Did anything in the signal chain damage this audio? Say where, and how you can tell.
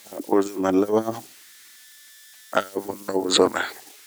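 Yes. A faint whistle near 2 kHz sits in the pauses throughout the speech, with grainy noise under the quieter passages, about 26 dB below the signal. These are converter idle tones: an undithered delta-sigma converter settling into repeating bit patterns at low input levels.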